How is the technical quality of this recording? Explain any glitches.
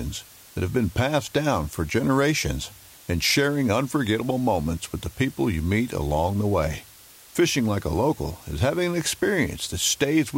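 Technical quality is poor because of one fault present throughout. Low bit depth with dither: a constant, even hiss sits only around 25 dB below the speech, consistent with roughly 7-bit resolution. Dither added before coarse rounding turns the quantisation error into steady white noise rather than distortion.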